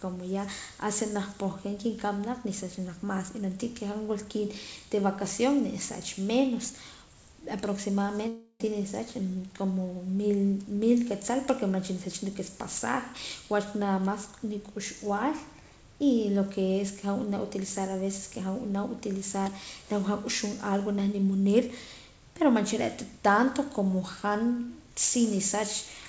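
Long network dropout, 8.28 to 8.63 s: about 0.32 s of speech is missing, likely because packets stopped arriving. The receiver stretches the last sound into a fading buzz, leaving about 50 ms of silence before speech resumes, all within the call's 8 kHz band.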